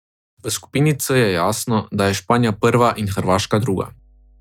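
At 2.49 s a steady low tone enters beneath the speech and stays until the end, at 4.40 s. This is mains hum at 50 Hz. The power line is leaking into the signal path, most plausibly through a ground loop or a nearby transformer. It sits about 35 dB below the speech, so it is quiet but constant. It is heard as a dull, even drone with a faint buzz from its low harmonics.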